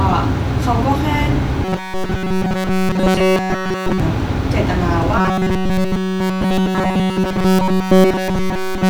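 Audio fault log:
1.65–4.00 s and 5.18–8.89 s, robotic sound from repeated short buffers: the speech flattens into a stiff, metallic buzz pinned at 188 Hz, with practically nothing fresh getting through. That's likely a tiny chunk of about 5.3 ms looping over and over while new audio fails to arrive.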